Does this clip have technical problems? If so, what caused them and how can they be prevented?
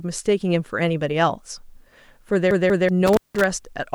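Yes. From 2.51 to 2.89 s the CD is stuck on one turn: a scratch keeps knocking the laser back, so the same 190 ms slice plays twice with short mutes between. That identical, evenly timed repeat sets it apart from random dropouts. Cleaning or replacing the disc prevents it.

From 3.06 to 3.44 s an intermittent contact opens for about 175 ms, cutting the sound out with crackle at both edges. Unlike the CD skip, nothing repeats; there is just an irregular break. Securing or replacing the loose cable or plug prevents it.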